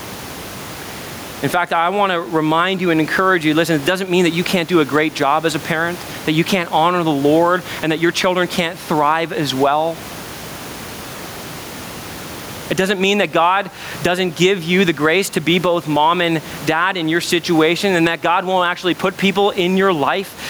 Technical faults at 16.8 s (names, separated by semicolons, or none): gain pumping